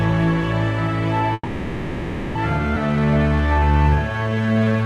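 A recording of everyday sounds, and at 1.33 s it stalls: the last bit of sound is stretched into a fading buzz that lasts to 2.37 s, falls silent for its final 20 ms, and then resumes where it left off. This is a call audio freeze, likely caused by packets held up in transit so the jitter buffer ran dry and the receiver filled about a second by extending what it last had. Between 2.75 and 2.78 s the audio jumps forward with almost no gap, and roughly 0.7 s of material is simply gone, its two edges butted together. That is a skip ahead: with later audio already queued after the stall, the receiver dropped a stretch to pull the delay back down. From 2.87 s to 4.85 s everything plays drawn out at about 81% speed without any change in pitch, adding 376 ms. This jitter buffer slow-down comes from the receiver repeating single pitch periods and slivers of quiet over and over to rebuild a reserve after the buffer had been emptied.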